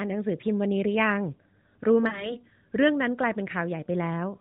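Around 2.08 s you get lost AMR speech frames, and the disturbance runs to about 2.36 s. The gap is about 40 ms, roughly two 20 ms frames' worth, so the decoder covered it by repeating the last good pitch and vocal tract settings at falling gain. You hear a short smeared, warbly dip, and the speech comes back a touch weak and rough before settling. All of this sits inside the narrowband AMR sound, capped at 4 kHz.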